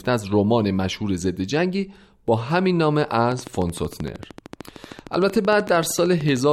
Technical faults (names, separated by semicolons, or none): train of clicks